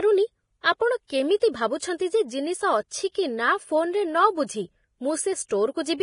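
Speech with heavy lossy-codec damage throughout: grainy, hissy treble and nothing above 10.5 kHz, likely Vorbis encoding at a bitrate around 29 kbps. Pre-echo appears from 1.07 to 1.10 s and at 1.40 s, where block-spread quantisation noise leaks as brief hiss before sharp attacks, smearing their onsets.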